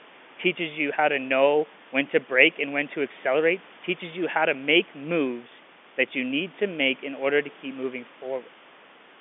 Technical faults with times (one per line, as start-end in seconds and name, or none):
none